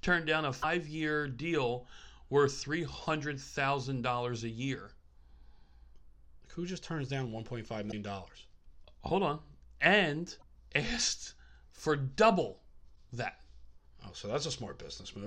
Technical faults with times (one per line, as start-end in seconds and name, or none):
0.59-0.65 damaged data in a compressed stream
7.88-7.93 damaged data in a compressed stream
10.39-10.44 damaged data in a compressed stream
12.92-12.97 damaged data in a compressed stream